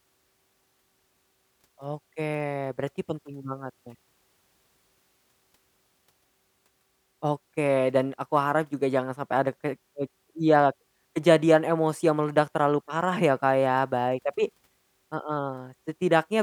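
Listening to the speech recording, nothing stood out as a technical problem at any point.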